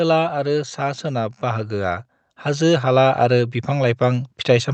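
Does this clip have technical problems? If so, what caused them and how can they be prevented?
Yes. From 0.3 s to the end, the level climbs steadily as automatic gain rising takes hold. The gain control judged the input too quiet and kept raising its gain. The speech and the background noise swell together, while the call path's roughly 8 kHz ceiling stays constant. To prevent this, set the input level correctly at the source and cap or disable adaptive gain.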